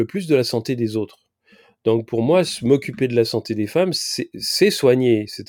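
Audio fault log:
No fault is heard anywhere in this speech clip. Nothing in it calls for an entry in this log.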